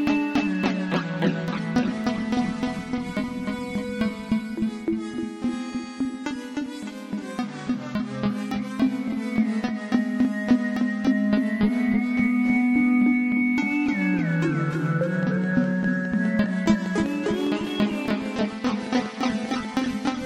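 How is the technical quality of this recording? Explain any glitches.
There's one real glitch: a train of clicks from 15.23 s to 20.07 s. About 30 evenly spaced ticks at roughly 5 per second poke a little above the sound, most likely interference or a faulty connection or power supply.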